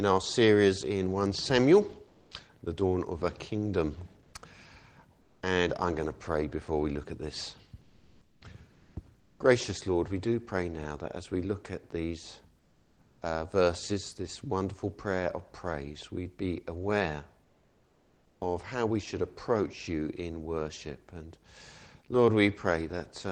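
Comfort noise in place of the background appears at 2.07–2.31, 4.23–4.33, 5.21–5.41, 7.81–8.41, 8.73–8.95, 9.19–9.39, 12.59–13.21 and 17.43–18.41 s, lasting 0.1 to nearly 1 s. In each gap the real background, about 35 to 41 dB below the loud passages, gives way to a flat, detail-free hiss, mostly slightly quieter (down to about 7 dB at 9.19 s). This is likely discontinuous transmission of the kind Opus DTX uses, with the receiver synthesising noise until sound resumes.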